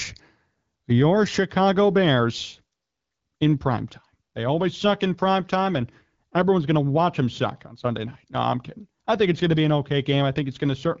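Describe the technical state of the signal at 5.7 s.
At 5.7 s the signal is intact, carrying the clear, lightly coded sound of wideband HD Voice with nothing above about 7.6 kHz.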